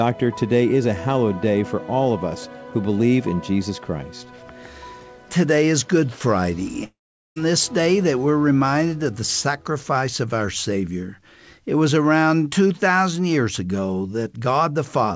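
From 6.84 to 7.38 s the sound is replaced by a fading continuation of what came just before: a short buzzy tail that dies away, then roughly 0.4 s of near-silence, before the audio resumes with about half a second simply missing. This is likely a long network dropout. Unlike a brief packet-loss glitch, the concealment gives up and goes quiet. The call-path band limit at 8 kHz, consistent with G.722, is present throughout.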